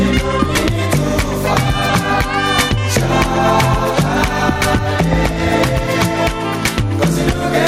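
Gain pumping runs through the whole clip, with the level swinging by roughly 5 dB. The likely cause is gain set far too high at the microphone, with a fast limiter or compressor clamping it on each peak. Unlike a noise gate, it does not cut the sound to silence. The loud and soft passages sit squashed close together in level.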